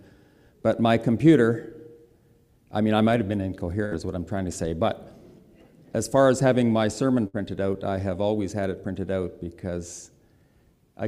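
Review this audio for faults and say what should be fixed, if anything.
Burst of packet loss at 3.85–3.94 s and 7.27–7.36 s: packets went missing, so the receiver held and faded the last sound for 59 ms, then skipped 60 ms ahead.

Adding forward error correction and a deeper jitter buffer on the network link would keep these gaps from occurring.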